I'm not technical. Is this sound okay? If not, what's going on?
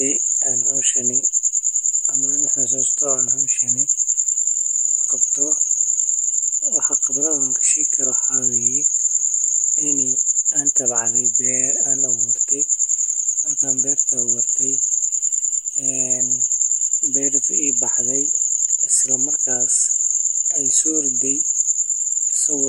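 Yes, this recording sounds fine, and there's nothing going wrong with it that you need to worry about.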